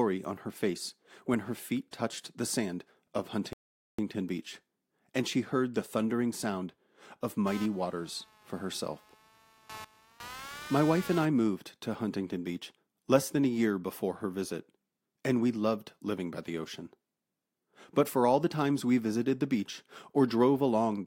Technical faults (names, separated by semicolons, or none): rebuffering stall; computer activity noise